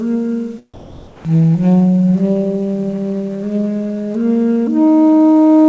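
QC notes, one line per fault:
0.74–1.25 s, comfort noise in place of the background: the background becomes a flat, featureless hiss about 6 dB quieter, likely from discontinuous transmission filling the gap.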